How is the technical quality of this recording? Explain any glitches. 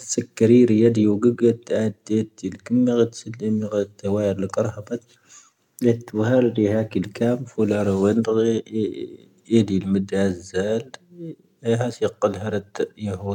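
No technical glitches can be heard in this recording.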